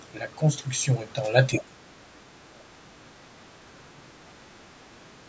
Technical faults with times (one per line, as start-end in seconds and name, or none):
1.58-4.40 speech suppressed in double talk
4.68-4.77 background gated by the echo canceller
5.07-5.13 speech suppressed in double talk